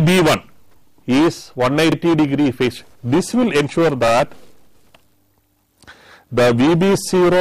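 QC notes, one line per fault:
1.92–1.96 s, repeated buffer: a roughly 40 ms chunk plays twice with a hard join, giving a quick stutter as the device replayed its last buffer. Nothing seems lost.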